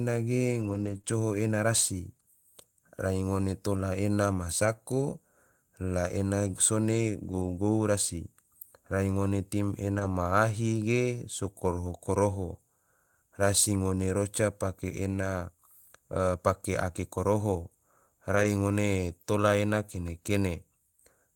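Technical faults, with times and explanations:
0.61–0.95 s, 1.05–1.07 s, 3.73–3.79 s, 4.61–4.67 s, 7.23–7.57 s, 9.95–10.05 s and 18.31–18.45 s: lost packet rebuilt from error correction. The speech continues without gaps but turns grainy and noisy for short stretches. The longest, at 0.61 s and 7.23 s right after "ena sone", last about 180 ms. Others follow "rai ngone" at 3.73 s and precede "ngone tola ena" at 18.31 s. Each lost packet was replaced by a low-bitrate copy carried in the next packet, so the sound is coarser there.
0.97 s and 1.01 s: short concealed packet loss. Two back-to-back holes of about 20 ms each produce a brief smeared wobble. Nothing arrived for those moments, so the decoder extended the preceding sound and then blended back into the received audio.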